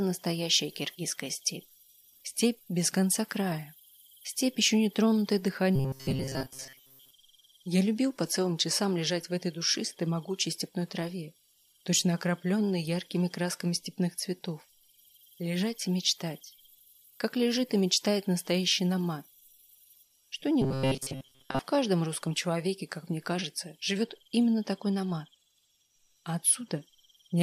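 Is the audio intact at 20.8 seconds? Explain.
No. From 20.62 to 21.59 s the sound turns into a rigid, metallic buzz at 133 Hz: robotic sound from repeated short buffers. Late-arriving audio was likely filled by looping a segment of about 7.5 ms, replacing roughly two-thirds of the span.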